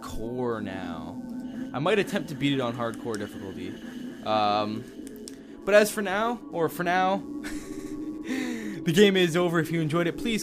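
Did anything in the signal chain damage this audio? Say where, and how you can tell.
Yes. A computer activity noise runs through the analogue wiring for the whole clip: a buzz pulsing about 150 times a second, roughly 40 dB under the sound. Processor or graphics load shifts the shared ground. A spectrogram shows faint harmonic lines from 150 Hz upward, and the waveform shows small periodic pulses in the quiet gaps.

Repeated frames point to the codec or storage stage. At 0.84 s a 23.2 ms block plays twice. From 7.71 to 7.92 s a 69.7 ms block plays three extra times, adding 209 ms. A spectrogram shows identical patches side by side, with vertical seams wherever the block edges don't match.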